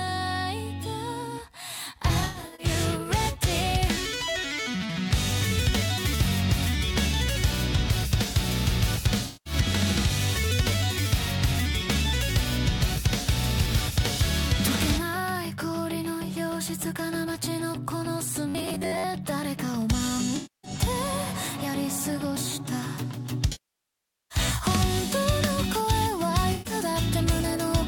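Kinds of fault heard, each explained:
AAC frame loss with concealment: When compressed frames go missing, the decoder patches the gap by reworking the last good spectrum, which gives a smeared, noisy, phasey stretch instead of the real audio. Here it hits near 2.08 to 2.66 s (about 277 ms lost in scattered bursts, the longest run about a tenth of a second), 9.26 to 9.53 s (192 ms), 20.36 to 20.71 s (277 ms), 23.52 to 24.38 s (789 ms, the longest) and 26.52 to 26.73 s (128 ms). On a spectrogram these show as blurred, textureless blocks with lost harmonic detail. In the waveform the envelope flattens or sags.
robotic sound from repeated short buffers: From 18.48 to 19.04 s the sound turns into a rigid, metallic buzz at about 93.8 Hz. The likely cause is the playback side running short of new data and looping a roughly 10.7 ms slice of recent audio, with most of the real material in that stretch skipped. 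The loop length forces its own fixed pitch onto the sound. A spectrogram shows evenly spaced horizontal bands at 93.8 Hz multiples. The waveform repeats the same short shape over and over.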